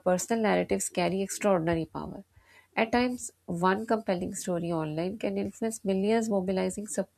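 Listening to this speech recording, nothing stood out as a technical problem at any point.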